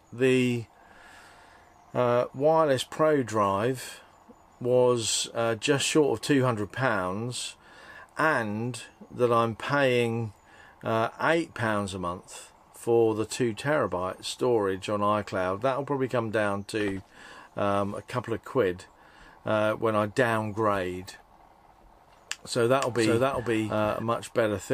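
From 22.81 s to 24.03 s the audio carries a doubled audio track: a second full-band copy runs about half a second behind the original at roughly the same level. It has no decay or room colouring, and it cuts in and out abruptly at those two points. The likely cause is the same signal being captured again through a slower path, or an edit leaving two copies out of alignment.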